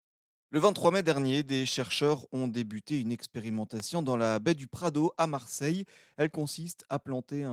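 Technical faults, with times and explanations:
3.80 to 3.82 s, loud pop: a single sharp pop, roughly 10 dB above the speech, lands just before "dans la baie du", with the speech carrying on underneath. It's likely a brief voltage step, from a plug, switch or static discharge, added to the signal.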